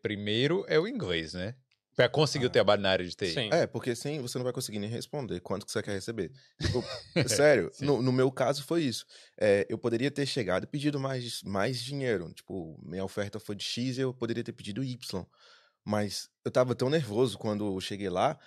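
No technical faults can be heard in the speech.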